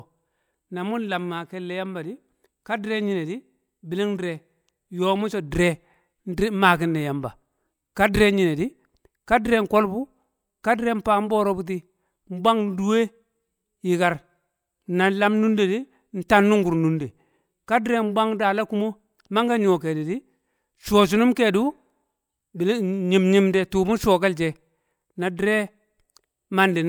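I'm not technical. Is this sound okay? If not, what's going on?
Yes, I can hear no technical faults anywhere in this speech recording.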